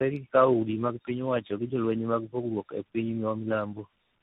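Tandem speech coding runs through the whole clip. The speech sounds like it passed through three speech coders in a row, each re-encoding the previous one's degraded output. Errors compound into a rough, warbly, muffled result, with nothing above 3.8 kHz.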